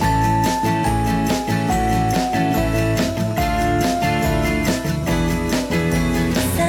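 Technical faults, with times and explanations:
No technical faults are audible.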